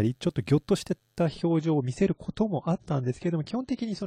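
At 1.26 s the speech drops abruptly to an adaptive stream at a lower bitrate, and it stays there to the end of the clip. There is no gap, just a sudden step down in quality: the treble is cut, with nothing above 9.9 kHz, and codec artefacts rise. This points to the player switching from a rendition near 96 kbit/s to one near 24 kbit/s after the connection slowed.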